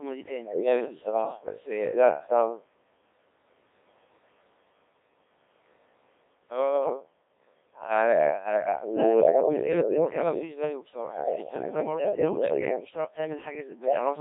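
Throughout, the speech carries heavy Codec 2 vocoder damage, rebuilt from sine waves, robotic and buzzy, fitting about 1.3 kbit/s; spectrograms show smeared harmonics confined between 300 Hz and 3.7 kHz.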